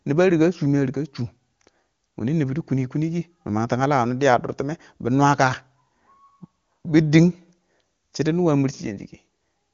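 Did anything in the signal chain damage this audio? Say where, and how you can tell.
No, nothing in the signal chain damaged this speech. It has passed through the AMR wideband (HD Voice) codec, with no content above 7.4 kHz and no audible coding damage, which fits the codec's highest rate of 23.85 kbit/s.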